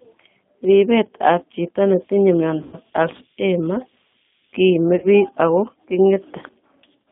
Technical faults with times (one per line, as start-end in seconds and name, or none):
0.00-7.11 G.729 codec
2.63-2.78 VoIP packet loss concealed by the speech codec
4.96-5.08 VoIP packet loss concealed by the speech codec